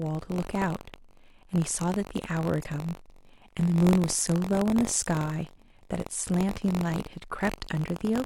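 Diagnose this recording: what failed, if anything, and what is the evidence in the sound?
Buffer tearing at the driver or buffer stage. A robotic 46.9 Hz buzz rides under the speech throughout. That rate fits a 1024-sample buffer read out of step.

Damaged data in the compressed stream, a codec-stage fault. A glitch sounds from 2.60 to 2.65 s. The decoder misreads corrupt frames there and must resync.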